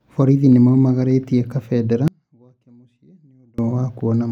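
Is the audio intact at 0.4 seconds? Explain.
Yes, the audio is intact at 0.4 seconds, with no audible fault at that point in the speech.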